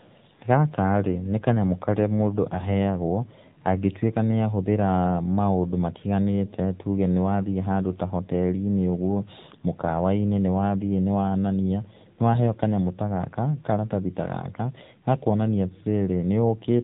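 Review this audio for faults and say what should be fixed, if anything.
The whole clip has the AMR narrowband mobile codec sound: nothing above 4 kHz, and a clearly buzzy, synthetic quality that suggests a low mode around 7.4 kbps. To avoid it, record or send the speech over a wideband path instead of a narrowband phone link.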